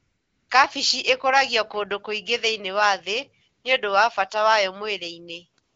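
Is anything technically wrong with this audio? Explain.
Yes. AMR comfort noise appears twice: from 0.00 to 0.49 s and from 5.63 to 5.76 s. In those pauses the phone treated the input as silence and stopped sending speech frames. The receiver generated a smooth, steady synthetic noise in place of the real background, so the background audibly switches at each boundary. The speech between carries the light coding of AMR wideband (HD Voice), consistent with 12.65 kbit/s.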